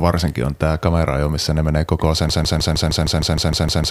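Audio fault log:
2.29–3.91 s, broken-record loop: a 155 ms snippet of the speech repeats back to back, about eleven times, right to the end of the clip. The player or stream likely stalled and kept replaying its last fragment, so whatever should have followed is gone.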